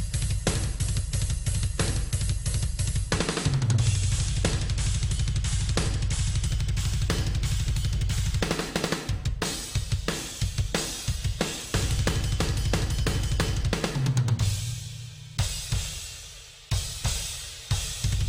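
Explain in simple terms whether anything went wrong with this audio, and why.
Imaging from linear upsampling starts at 6.46 s and runs to the end. The sound's sample rate was raised, likely from around 24 kHz, by joining samples with straight lines. That dulls the top end and leaves faint mirrored copies between 12 kHz and 24 kHz, heard as a light metallic shimmer.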